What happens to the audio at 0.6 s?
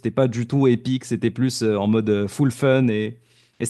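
Nothing goes wrong at 0.6 s; the speech carries on cleanly there, with no dropout, click or distortion to be heard.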